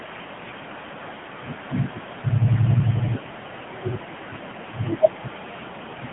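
AMR narrowband mobile codec damage runs throughout: speech is cut to a phone band of about 150 Hz to 3.5 kHz, with nothing above 3.8 kHz. The buzzy, synthetic edge fits a low 7.95 kbps mode, too few bits per frame to model the voice faithfully.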